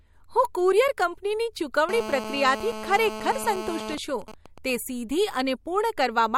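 GSM phone buzz runs from 1.89 to 3.95 s. A 2G handset close to the recording chain is in a call and transmits its radio bursts about 217 times a second, and some stage of the audio circuitry rectifies those pulses into an audible signal. The result is a hard, raspy buzz pitched at 217 Hz with a dense stack of harmonics, sitting about 9 dB below the speech and holding steady without following it.

GSM signalling bursts follow from 3.98 to 4.70 s. The handset is still in the call, but with its user silent it transmits only intermittent groups of bursts at the same 217 Hz rate. The circuit rectifies each group, so the continuous buzz breaks into even ticks with a longer 217 Hz buzz twice a second. This pattern is fainter than the earlier buzz, roughly 15 dB under the speech.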